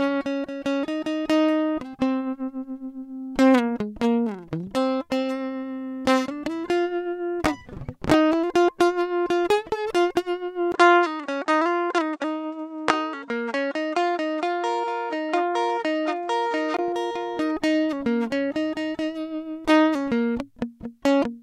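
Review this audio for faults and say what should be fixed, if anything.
At 10.72 s a 20 ms gap, then dull, faintly hissy music capped at 9.3 kHz until 16.79 s, likely the input switched to a poorer device. Pin the recording input so it can't change mid-take.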